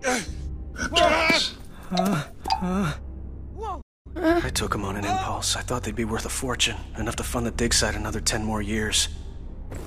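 At 3.81 s the player likely ran dry of buffered data, or its playback thread was held up, and it produced a playback stall lasting about 235 ms, until 4.07 s. While it waits for data, the output has nothing to send, so the sound cuts off abruptly in mid-flow and leaves a short, clearly audible hole of silence. When playback recovers, the audio picks up again, making the gap stand out.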